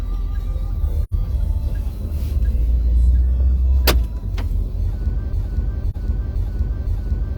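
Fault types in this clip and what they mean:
AAC frame loss with muting: a soft-edged silent hole of about 85 ms at 1.03 s and a brief dip of 43 ms near 5.9 s, fading out and in.
broken-record loop: from 5.33 s to the end, a 0.51 s fragment repeats exactly and back to back, with no decay like an echo, likely a stalled stream resending its last buffer.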